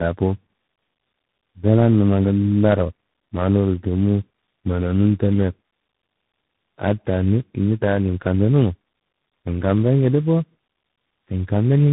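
Rough, muffled and warbly throughout, with nothing above 3.8 kHz, the speech shows tandem speech coding. It sounds like three speech coders in a row, the last likely CVSD. Each re-encodes the previous one's already damaged output, so the distortions accumulate.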